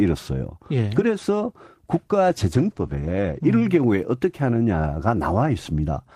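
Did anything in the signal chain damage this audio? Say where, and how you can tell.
Yes, there's a call bitrate drop at the codec stage, from 2.29 s to about 3.53 s. The speech goes rough and watery for roughly a second, which fits the encoder being throttled from 32 to 16 kbps after the bandwidth estimate fell, so it coded everything more coarsely.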